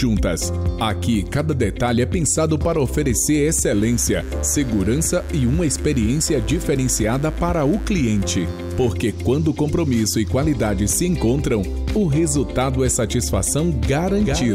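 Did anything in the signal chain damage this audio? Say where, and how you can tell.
Yes: mains buzz enters in the analogue wiring from 3.72 to 8.90 s, a raspy 50 Hz harmonic series about 25 dB below the signal, from switching spikes coupling in.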